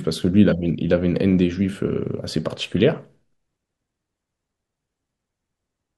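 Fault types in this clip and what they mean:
Nothing to flag here: the speech comes across without any technical faults to point out.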